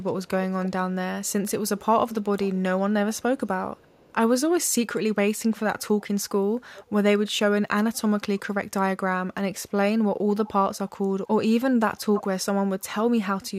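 Speech with echo leak: a loudspeaker-side echo canceller likely passed residue back, so a copy of the voice about 315 ms late returns at 0.07–0.7, 1.24–2.79, 3.13–3.22, 3.76–4.15, 6.0–6.04, 6.74–6.89 and 11.99–12.43 s, strongest in that last stretch.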